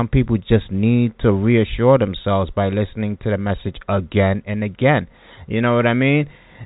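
No technical faults can be heard anywhere in the speech. It comes through the G.711 telephone coding path, which leaves the band closed off above about 3.8 kHz, as a standard telephone line does.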